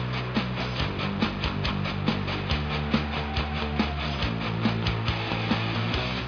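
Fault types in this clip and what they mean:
No technical faults are audible.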